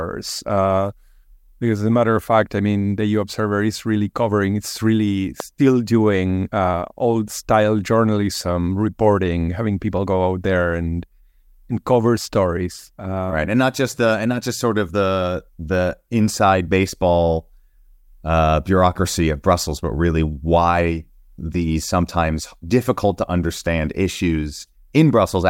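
A sudden voltage step or pulse, likely from a plug, a switch, static discharge or a driver glitch, entered the signal chain once, from 5.40 to 5.42 s. It is heard as a single loud pop, about 10 dB above the surrounding speech, right after "really covering it's really" and just before "doing uh old style." The speech continues underneath the pop without interruption, so the fault sits on top of the audio rather than replacing any of it.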